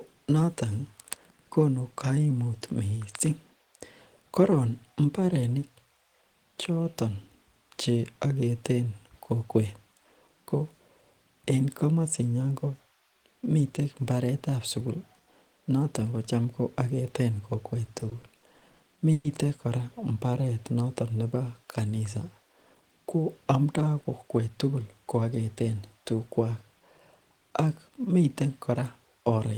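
From 17.85 to 19.26 s, repeated stalls (stutter): eight late-packet gaps, up to 120 ms, get filled by stretching prior sound, so the speech drags rather than losing anything.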